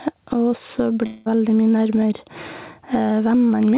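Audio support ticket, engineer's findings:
Gain pumping, throughout: level swing around 15 dB, dynamics squashed. Likely input gain set far too high, fast limiter/compressor clamping every peak.

Long network dropout, 1.06 to 1.28 s: sound smears into a fading buzz for about 0.2 s, no hard silence. Speech resumes with that section missing. Receiver concealment extrapolating after a likely packet loss run. Narrowband G.711 path, nothing above 4 kHz.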